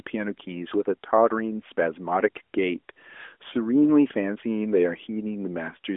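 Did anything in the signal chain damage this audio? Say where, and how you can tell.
No, nothing in the chain damaged this one; it's a narrowband phone-line recording going through the AMR mobile codec as intended, with no stage adding any trouble of its own.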